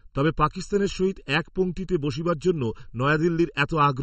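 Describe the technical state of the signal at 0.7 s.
At 0.7 s the speech sounds hollow and phasey. This is channel delay (comb filtering), present for the whole clip. One channel lags by under a millisecond, and summing to mono cancels evenly spaced frequencies. The first notch falls around 700 Hz.

The same moment also sounds watery and swirly, with smeared attacks. Nothing is heard above 8.4 kHz. The likely cause is MP3 compression, running throughout, and the plainly audible damage fits a low bitrate near 34 kbps. Weak frequency lines switch on and off between frames.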